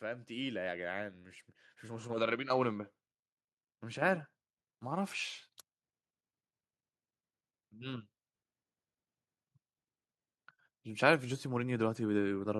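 From 0.05 to 1.23 s and again from 1.81 to 2.95 s, automatic gain rising lifts the level by about 6 dB each time. The gain control judged the input too quiet and ramped up, so the speech and the background noise swell together.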